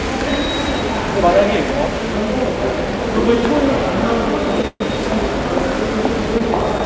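At 4.67 s the everyday sound breaks off into a call audio freeze lasting until 4.82 s. The final fragment is drawn out as a fading buzz, closing on about 50 ms of near silence, roughly 130 ms in all, most likely because packets were held up and the jitter buffer ran dry. On a spectrogram this shows as smeared horizontal bands thinning into a blank strip. The waveform shows a decaying envelope, then a flat line before the sound resumes where it stopped.

From 6.38 s to 6.42 s comes a short stall from a late packet. The receiver stretched the last sound for about 17 ms while it waited, so a moment is held slightly too long, with a faint buzz, and then continues without loss. On the waveform this appears as a brief repeated or sustained cycle with a small dip. The spectrogram shows a narrow, slightly smeared column, capped like the rest of the G.722 call audio at 8 kHz.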